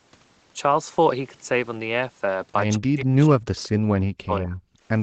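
Speech with two brief echo leaks, at 2.73–2.77 s and 3.57–3.66 s. A faint copy of the voice played on the far end's loudspeaker arrives 177 ms late at roughly 25 to 30 dB below the speech, most likely loudspeaker pickup that the far end's echo canceller failed to remove. From 2.78 to 4.58 s the talker is repeatedly dipped, by up to around 40 dB and for about 1.5 s in total, which is speech suppressed in double talk. This is likely the echo canceller attenuating both sides while they overlap. Nothing reaches above 8 kHz, consistent with the Opus call path's bandwidth.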